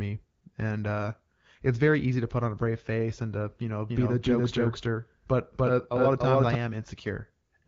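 Just after "and to you know", at 3.89 s, a doubled audio track begins. A full-band copy of the speech trails roughly 300 ms behind at about equal loudness, likely from a second, slower capture path. Unlike an echo, it has no decay or room colour, and it stops abruptly at 6.55 s.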